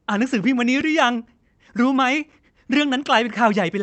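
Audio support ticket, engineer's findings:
Block of digital silence at 0.81 s in the speech: a single sharp tick, roughly 5 ms of hard dropout. Probable component is playback/render buffer underrun. One block left unfilled and zeroed, which fits a 256-sample buffer.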